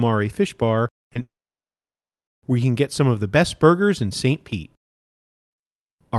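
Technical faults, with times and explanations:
1.03–1.07 s and 1.13–1.17 s, short concealed packet loss: two brief smears, where the sound wobbles for an instant instead of carrying on cleanly. About 20 ms of audio failed to arrive in time each time, and the receiver bridged the gap by extending the preceding sound before blending back.
1.21–2.29 s, long network dropout: a short fading buzz quickly gives way to about a second of near silence, and the sound then resumes with that stretch simply gone. This is most likely a stall in the network, with concealment briefly extending the last sound before giving up.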